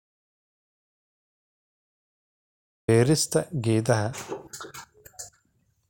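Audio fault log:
0.00–2.88 s, audio dropout to silence: under way from the start, silence with no room tone, unlike a natural pause; speech then cuts in abruptly, likely from a lost input.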